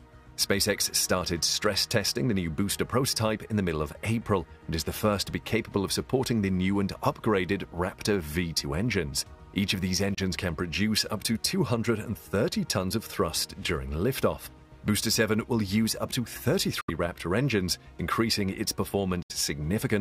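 Audio packets were likely arriving too late at the headphones and being discarded, a Bluetooth dropout. The output goes silent at 10.14 s for about 23 ms, then at 16.81 s and 19.22 s for about 70 ms each, resuming mid-flow as though it had kept playing.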